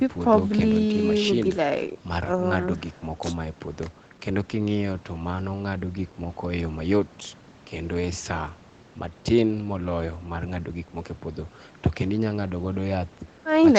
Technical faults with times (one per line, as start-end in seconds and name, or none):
none